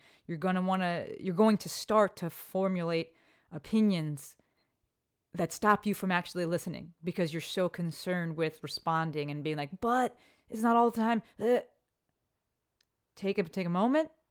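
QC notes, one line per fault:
Nothing stood out on listening to the speech.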